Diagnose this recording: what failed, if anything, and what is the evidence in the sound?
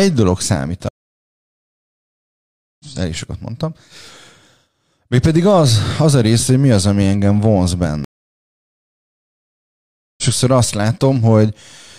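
The network stream dropped twice, a stream reconnect each time: the player fell silent and resumed with a fresh decoder. From 0.89 to 2.85 s, about 1.9 s of silence before "ezt elég sokat mondtam", the speech picks up roughly two seconds further on. From 8.04 to 10.24 s, after "az ami engem vonz", about 2.1 s of silence, and the speech skips ahead by about one and a half seconds.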